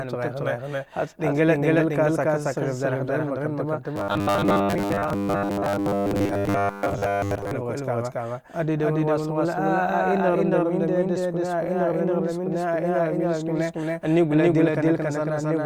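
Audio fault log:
Throughout: doubled audio track. A second full-strength copy of the speech trails about 300 ms behind, with no decay, likely from a slower duplicate capture path.
3.96–7.52 s, just after "dghin mak ranta va": robotic sound from repeated short buffers. A rigid metallic 100 Hz buzz replaces natural tone, likely from repeating 10 ms snippets while most real audio is skipped.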